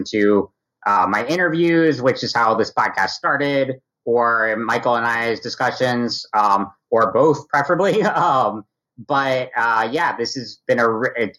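Channel delay (comb filtering) colours the sound for the whole clip: one channel runs roughly 0.2 ms late, and the mono sum cancels a first notch near 3 kHz, repeating at even spacing, unlike a low-pass filter's smooth top-end roll-off.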